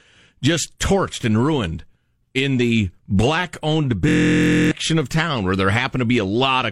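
From 4.09 to 4.71 s, a system hang loop replays a stalled 23 ms buffer, a 43 Hz buzz: identical waveform cycles, evenly spaced spectrogram harmonics.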